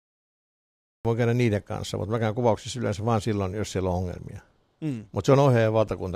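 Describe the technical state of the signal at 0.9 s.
At 0.9 s the signal is digital silence, part of a cut-off start running from 0.0 to 1.05 s. Capture began late, so speech enters mid-sound at 1.05 s with no attack, unlike a dropout.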